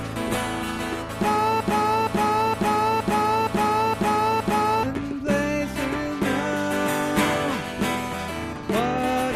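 From 1.61 s to 4.83 s, a fragment of about 0.47 s repeats exactly, back to back, seven times, and whatever should have played then is lost. This broken-record loop most likely comes from a stalled player, encoder or stream resending the last fragment it held.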